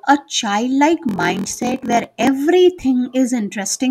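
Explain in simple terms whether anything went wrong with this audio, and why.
Something did go wrong, from 1.07 to 2.30 s. The speech picks up a steady buzz, about 43 times per second, and drags slightly, running at about 0.94 of its normal speed. The voice's character stays about the same. This is a block size mismatch (padded). One part of the system hands over chunks of audio that are too short for the next part, which fits chunks of 1024 samples. The missing bit of each chunk is filled with silence. Those tiny gaps repeat to make the buzz and stretch the speech.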